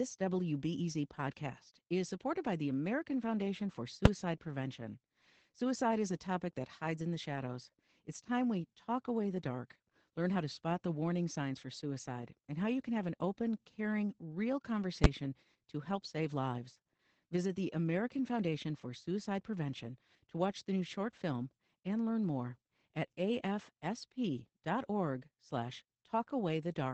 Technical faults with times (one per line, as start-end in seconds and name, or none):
0.00-26.93 Opus voice compression
4.05 invalid numbers at full scale
15.04 invalid numbers at full scale